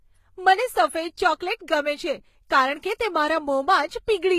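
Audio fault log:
throughout, transcoding between lossy codecs: the speech carries two layers of coding damage at once, most likely from a low-rate HE-AAC pass near 20 kbit/s re-coded through Vorbis near 44 kbit/s. The second codec spends its bits copying the first one's swirly, smeared highs and adds its own warble on top. Nothing remains above 14.9 kHz. A spectrogram shows a flat ceiling at 14.9 kHz, with patchy, blocky energy beneath it.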